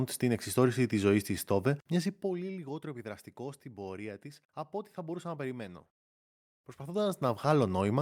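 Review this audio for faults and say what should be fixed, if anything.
From 5.66 s to about 7.57 s there's a call bitrate drop: the speech goes coarser and watery for nearly two seconds before clearing up again. That's the encoder being told to spend far fewer bits after the bandwidth estimate sagged, and the roughness fits a fall from around 64 kbps down to about 28 kbps. To prevent it, give the call a steadier network path or set a higher minimum bitrate so the encoder isn't pushed that low.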